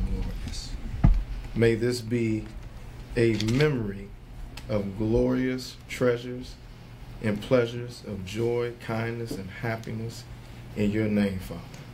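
No technical faults are audible anywhere in the clip.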